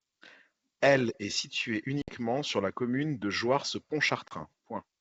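French speech with two hard-edged dropouts, at 2.02–2.13 s between "est située" and "sur la commune de" and at 4.28–4.33 s, each followed by speech that returns slightly distorted. This is packet loss on an ADPCM call: 60 ms and 30 ms of lost audio leave the decoder's predictor out of step until it resettles.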